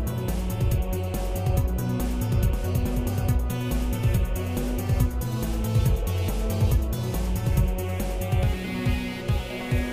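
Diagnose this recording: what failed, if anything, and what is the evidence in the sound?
Nothing failed; no fault is audible anywhere in it.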